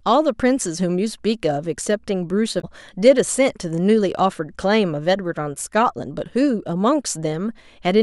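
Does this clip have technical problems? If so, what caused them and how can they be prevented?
Yes. From 2.58 to 2.64 s, damaged data in a compressed stream makes the decoder lose frame sync, giving a brief disruption in the audio. Checksummed storage or error-protected transmission prevents this.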